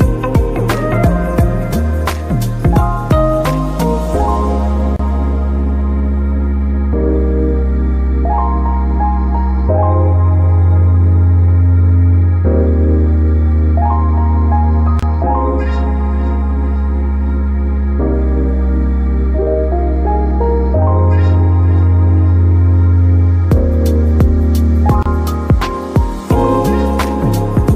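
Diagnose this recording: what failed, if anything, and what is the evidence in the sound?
Separately encoded pieces were joined at the codec stage without trimming encoder delay or final-frame padding, causing a gap at a join of encoded pieces. Gaps of 30 to 31 ms open at 4.96, 14.99 and 25.03 s, every 10 s, with smeared edges before the sound resumes.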